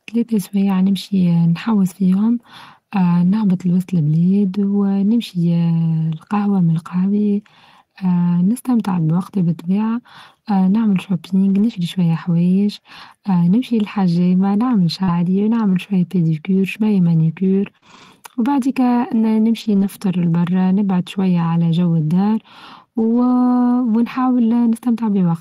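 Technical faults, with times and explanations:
5.79, 11.49–11.75, 12.97–13.03, 15.08, 17.82–18.04, 19.56–19.86 and 23.02–23.32 s: lost packet rebuilt from error correction. The speech never drops out, but these stretches turn rougher and noisier, from about 20 ms up to about 160 ms, as after "بوقتي بالطبيعة اه نعمل" and before "شوية حوايچ", after "شوية باديكير شويه مانيكير", and before "برا نبعد شوية على". The missing packets were replaced by low-bitrate copies carried in the following packets, so detail is lost without any gap.
15.03–15.10 and 17.78–17.84 s: short concealed packet loss. Each time about 40 ms of audio arrived too late to play, and the receiver bridged it by extending the preceding sound, following its pitch where it was voiced and using shaped noise where it was not, then crossfading back into the real signal. This is heard as a brief smear or wobble. Both gaps run straight into stretches rebuilt from error correction.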